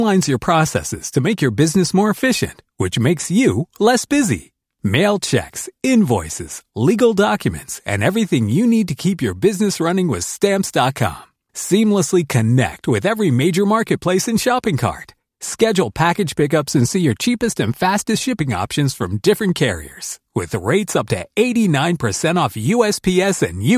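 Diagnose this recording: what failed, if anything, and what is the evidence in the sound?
Nothing failed in this speech recording. No stage in the chain, from the analogue side through conversion, processing, transmission and playback, leaves audible evidence of a problem.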